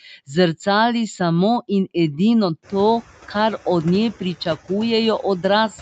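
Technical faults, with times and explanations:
Throughout, noise suppressor artifacts: the background noise drops about 10 dB in pauses and swells under speech, showing as a pumping, patchy noise floor on the spectrogram.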